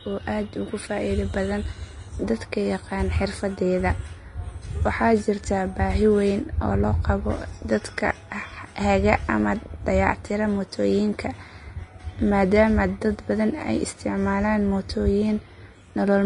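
Throughout the speech, the treble sounds hissy and grainy, and nothing is present above 10.6 kHz. This is likely Vorbis compression, at a rate that fits roughly 33 kbps. Unlike a plain low-pass filter, the coarsely quantised upper band is replaced by noise of similar energy, roughening tones and blurring attacks.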